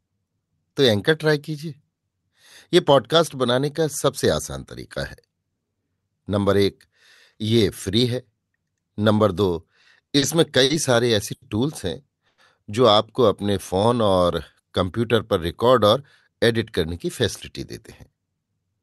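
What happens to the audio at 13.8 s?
At 13.8 s the speech is caught in a jitter buffer slow-down, which runs from 13.42 s to 14.05 s. The receiver's buffer was running low or had just raised its target delay, so it stretched what it had by repeating single pitch periods and slivers of pause. That adds about 67 ms, and the passage plays at roughly 91% speed. The pitch stays the same. Sounds are drawn out.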